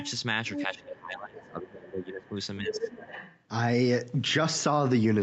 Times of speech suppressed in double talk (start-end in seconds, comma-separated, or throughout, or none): 0.67-3.02